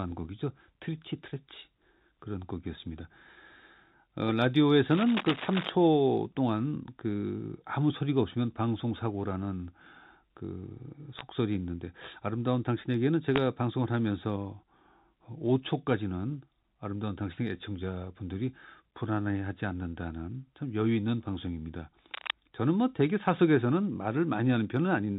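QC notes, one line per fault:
4.90–5.69 s, cable scratch noise: dense, uneven scratching sits over the speech, only a few dB below it, likely from a worn cable or connector being moved.
11.19 s, bit errors on a digital phone line: a short burst of sharp ticks as a few flipped bits corrupt individual samples in the mu-law telephone stream.
13.36–13.38 s, bit errors on a digital phone line: another brief crackle where a few wrong bits corrupt single samples.
22.14–22.34 s, cable scratch noise: a shorter rustling burst rides over the speech at nearly the same loudness, likely the sound of contact resistance fluctuating at a worn connection.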